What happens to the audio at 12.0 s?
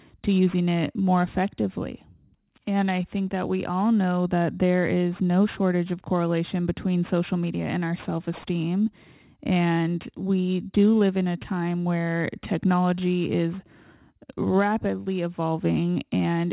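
At 12.0 s the speech carries aliasing, present across the whole clip rather than just at that moment. The audio was downsampled, which fits an 8 kHz rate, without an anti-alias filter, so content above 4 kHz folds back into the band, sitting roughly 25 dB below the signal and making sibilants gritty and metallic.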